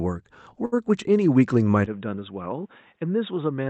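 From 0.65 to 0.74 s there is a short stall from a late packet: the jitter buffer ran dry, so about 67 ms of sound is held and stretched before resuming, with nothing lost. At 1.86 s the tone turns abruptly duller and about 5 dB quieter through the end, with nothing above 3.8 kHz and a faint new noise floor, likely from the input switching to a poorer device.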